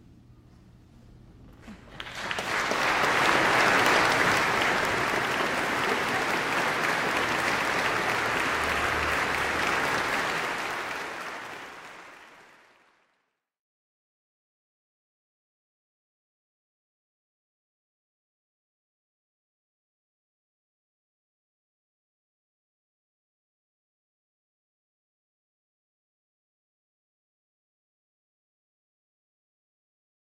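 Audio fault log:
No faults logged; timing and continuity hold steady across the whole clip.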